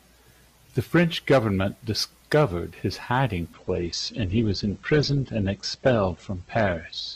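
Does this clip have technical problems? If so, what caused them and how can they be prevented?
Yes. From 3.53 s to 7.16 s the adaptive stream dropped to a lower bitrate after the connection slowed. The speech abruptly turns duller, with no gap, nothing above 8.2 kHz, and rising coding artefacts, which fits a step down from 64 to 12 kbit/s Opus. A larger playback buffer or a steadier connection would keep the player on the higher-quality stream.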